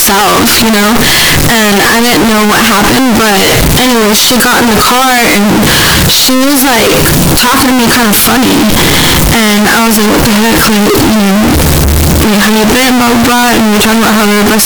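From start to finish, the speech comes out extremely loud and harsh. The waveform sits at an almost fixed, high level as a blocky, almost square shape, whatever the original level. Background noise is as loud as the talking. This is a float read as integer fault. The likely cause is 32-bit float samples being interpreted as 32-bit integers, so the sign and exponent bits dominate each value. The pitch of the speech can still be followed.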